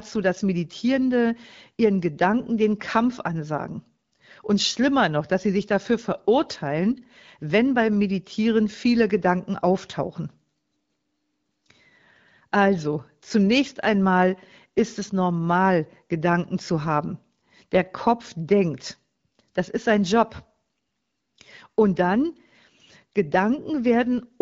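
No faults found in this speech, which is carried over the AMR wideband (HD Voice) codec at a rate consistent with 12.65 kbit/s, with the band above 6.4 kHz filled by shaped noise in the usual way.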